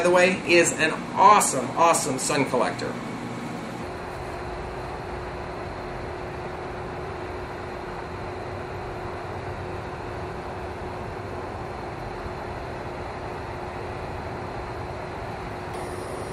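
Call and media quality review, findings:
No audible faults found.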